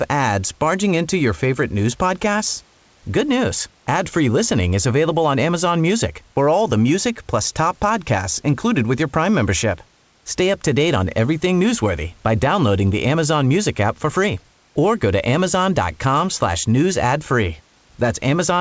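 The speech comes through a call path with nothing above 8 kHz, which fits a wideband codec, and the room noise sits about 39 dB below the speech, with no technical faults to be heard.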